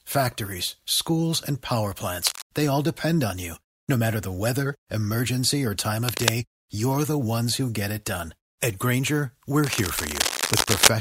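Cable scratch noise turns up three times: 2.25 to 2.43 s, 6.06 to 6.30 s, and a longer stretch from 9.62 to 10.91 s. It's a ragged, rustling burst sitting a bit under the speech at first, then about as loud, likely a worn lead or connector being shifted.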